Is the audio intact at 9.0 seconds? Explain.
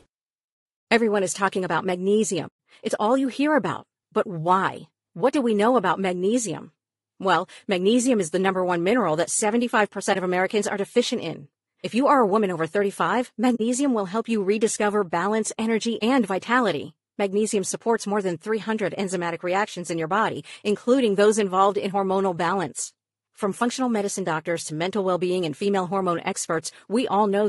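No. At 9.0 seconds the speech carries low-delay AAC compression, which runs through the whole clip rather than being confined to that moment. The damage is plainly audible: the voice sounds rough and grainy, with noise filling the gaps between pitch harmonics and a thin, synthetic-sounding top band. The likely cause is AAC-ELD, whose short frames resolve voice harmonics poorly and spend bits fast, and the degree of damage fits a bitrate of around 32 kbps.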